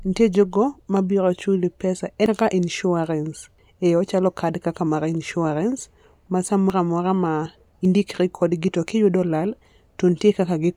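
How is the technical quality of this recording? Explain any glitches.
The speech has four abrupt skips, with audio missing but no silence in its place. These are likely dropped buffers (overruns): the hardware overwrote samples before the software collected them, so the surrounding audio is spliced directly together. Each join is heard as a jump forward. Roughly 150 ms goes missing at 2.26 s and 3.58 s, and around 40 ms at 6.70 s and 7.85 s.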